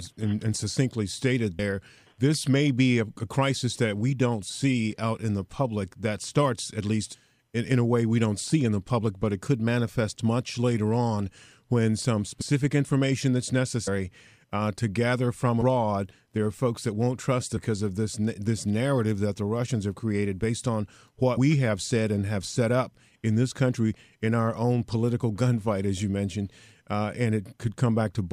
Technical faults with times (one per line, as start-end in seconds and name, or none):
1.58 compressed frames skipped
7.13 compressed frames skipped
12.40 compressed frames skipped
13.86 compressed frames skipped
17.56 compressed frames skipped